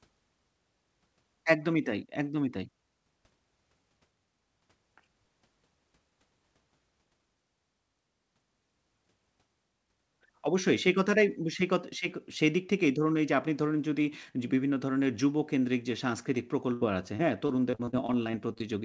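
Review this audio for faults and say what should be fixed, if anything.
Near the end, from 16.73 to 18.62 s, the speech turns choppy and robotic, broken by about a dozen short holes, the longest 77 ms. This is repeated packet loss: each missing stretch was covered by extending the preceding sound, so roughly a sixth of that span is concealed rather than real. The audio also has nothing above 8 kHz, which fits a G.722 call codec. Preventing this means steadying the network link, or adding forward error correction and a deeper jitter buffer so late packets still arrive in time.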